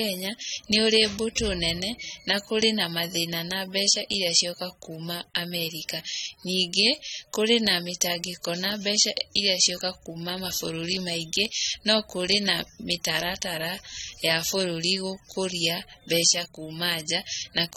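Speech, and the whole thing carries plainly audible AAC compression damage: it sounds dull and a bit smeared, with a fizzy, warbly edge on sibilants, and nothing comes through above about 18.9 kHz. That's likely a low-bitrate AAC-LC encode, roughly 32 kbps.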